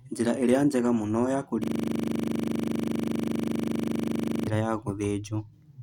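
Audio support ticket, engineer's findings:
System hang loop from 1.64 to 4.47 s, right after "ĩrĩa njega mũno ya": a 40 ms slice of speech repeating at 25 Hz, a stuttery buzz. Probably a frozen driver replaying its ring buffer.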